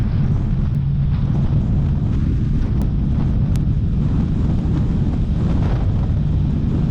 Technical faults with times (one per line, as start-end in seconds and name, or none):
0.75 bit error spike
2.82 bit error spike
3.56 bit error spike